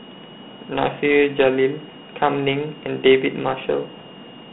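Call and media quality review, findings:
High whistle throughout, wandering between 2.83 and 2.91 kHz, roughly 25 dB under the speech. Probable switching supply whistle: regulator in audible burst mode coupling into the audio path.

Gritty, hissy grain riding the speech throughout, plainly audible. Band sits at 150 Hz to 3.6 kHz, nothing above 3.9 kHz. Points to Dialogic VOX ADPCM, 4-bit samples at 8,000 per second, fitting 32 kbit/s.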